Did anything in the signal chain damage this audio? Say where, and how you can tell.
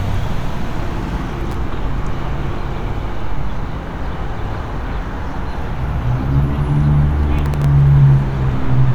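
Yes, the driver/buffer stage. There are two bursts of processor overload crackle, from 1.41 to 1.55 s and again from 7.39 to 7.64 s. Each one is a gritty tearing laid over the sound, made of a handful of tiny dropouts where the processor missed its deadline and output silence for that buffer. The spacing of the gaps points to very short buffers, around a millisecond and a half, and both bursts stop as soon as the load eases off.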